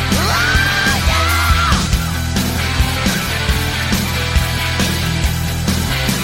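At 0.56 s, 1.86 s, 2.95 s and 6.06 s, compressed frames are skipped. Whole frames never reach playback. They were either missing or rejected by the decoder as damaged. Each time, the audio lurches forward. The jumps are about a tenth of a second, about 0.3 s, about 0.15 s and about half a second. Each is a multiple of a frame length that points to frames of about 23 ms.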